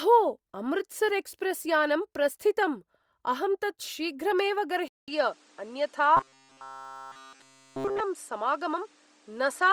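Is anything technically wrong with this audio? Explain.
Yes. From 4.88 s to the end, the sound abruptly turns duller and narrower after a gap of about 200 ms. A faint new background noise appears well below the speech, while the overall level stays about the same. This points to the input likely having switched to a poorer device mid-recording: a different microphone or headset path with a narrower band and its own noise floor.

Between 6.17 s and 8.00 s, the speech becomes a rigid, metallic buzz pitched at 134 Hz that only loosely tracks the talker. This is robotic sound from repeated short buffers. It is likely caused by new audio arriving too seldom, so essentially all of that stretch is a roughly 7.5 ms chunk looped over and over while the real audio is skipped. That repetition rate fixes the pitch.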